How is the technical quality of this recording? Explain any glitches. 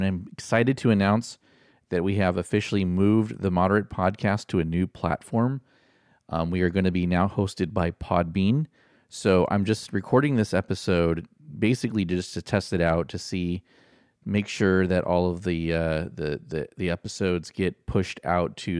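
The technical quality is sound: the signal runs continuously without any glitch, interruption or disturbance anywhere in the recording.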